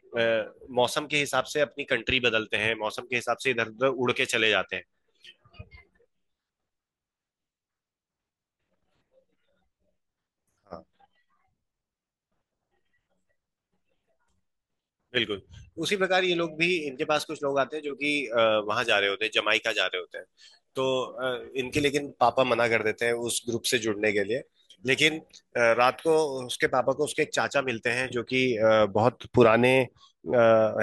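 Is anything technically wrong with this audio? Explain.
Yes. From 19.51 to 26.66 s the speech turns thin, bright and hissy, with sibilants exaggerated, then returns to normal. This is pre-emphasis left on: the treble was boosted before recording or transmission, and the matching de-emphasis cut was never applied on playback. The tilt fits the CD 50/15 µs curve, leaving content at 10 kHz about 8 dB too strong relative to 1 kHz.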